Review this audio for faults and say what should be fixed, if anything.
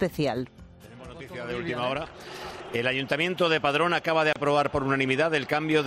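A gap at a join of encoded pieces opens from 4.33 to 4.36 s. The sound breaks for a 28.5 ms gap, then carries on from where it stopped. The edges are smeared by the codec. Two separately encoded pieces were joined untrimmed, so one run's end padding and the next run's start delay both remain. To prevent it, trim each piece's encoder delay and padding before joining, or encode the whole stream in one pass.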